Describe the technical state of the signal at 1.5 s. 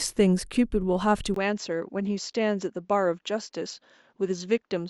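At 1.5 s the speech sits in a changed input that began at 1.34 s, after a 20 ms gap, and runs to the end. The cause is likely an input switched to a poorer device. Nothing remains above 7.6 kHz, the level drops by around 5 dB, and a new noise floor appears far below the speech. A plain low-pass filter would not bring that gap, level drop or added noise.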